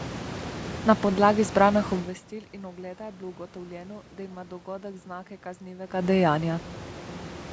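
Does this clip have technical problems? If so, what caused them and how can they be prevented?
No, the speech signal has no technical faults, and the room noise sitting about 12 dB below the voice and the level shifts around 2 s and 6 s, where the talker moves relative to the microphone, belong to the recording itself rather than to the system.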